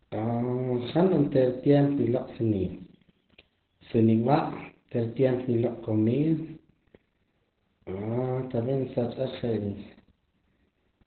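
From start to finish the speech sounds muffled, hoarse and slightly robotic, with nothing above about 4.4 kHz. This is heavy Opus voice compression: its SILK coder has narrowed the band and coded the excitation coarsely, which fits a bitrate around 8 kbps.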